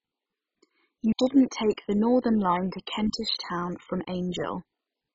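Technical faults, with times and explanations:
Throughout, MP2 compression: the speech is dull and nothing is heard above about 7.5 kHz, while a heavy gurgling, granular roughness runs through it. The likely cause is MPEG Layer II coding starved of bits, which fits a rate around 16 kbps. Upper sub-bands are switched off and those left are quantised coarsely. A plain low-pass filter would dull the sound without this grainy churn.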